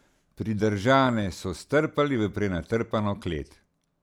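No technical faults can be heard in the speech.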